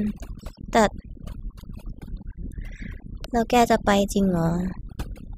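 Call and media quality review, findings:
Overdone noise removal, whole clip. Noise suppressor set far too aggressive: gates any frequency band sitting near its noise estimate, taking low-level speech energy with it. Result: lowered background breaking up into twinkling specks.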